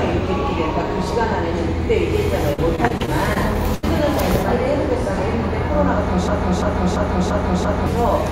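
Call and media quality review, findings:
Repeated packet loss (robotic sound), 2.53–3.85 s: choppy stretch, a string of short holes, longest about 79 ms. Jitter buffer/PLC on the receive side is stretching the last bit of audio over each gap. Roughly a fifth of that span is patched, with about 240 ms of real audio gone.

Broken-record loop, 6.28–7.86 s: a 0.34 s fragment plays back to back five times, identical each pass. Likely cause: a stalled player, encoder or stream that kept resending the last buffered chunk. Whatever should have played there is lost.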